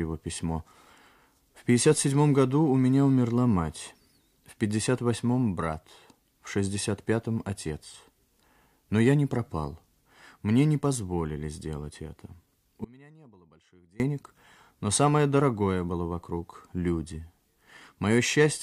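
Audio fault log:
12.84–14.0 s: audio dropout to a faint residue. The sound cuts out abruptly for 1.16 s, then returns mid-flow. Only a faint leak remains, roughly 25 dB down. The break is sudden, not a fade. The wanted signal was likely lost while the path after the break stayed live.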